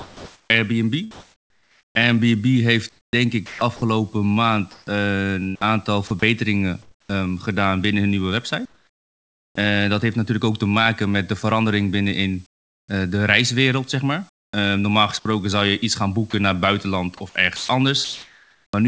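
From the start to 7.09 s, just before "gedaan binnen hun nieuwe", the speech is chopped by the voice detector, likely toggling transmission on and off. About 2.3 s of quiet syllables and word edges get swapped for synthetic fill, so the speech sounds choppy.

Then comes comfort noise in place of the background from 8.65 to 9.55 s, between "gedaan binnen hun nieuwe" and "dat heeft natuurlijk ook". The sender likely stopped transmitting, and the receiver patched in flat, featureless noise about 12 dB quieter than the real room. Again at 12.46 to 12.88 s the background drops out, this time about 25 dB down.

After "reiswereld zeg maar", from 14.29 to 18.73 s, the voice-detector chopping returns, with about 1.2 s replaced, likely by the same switching, giving the same stuttering speech edges. Throughout, the call path audibly tops out at 8 kHz, which fits a G.722 wideband codec.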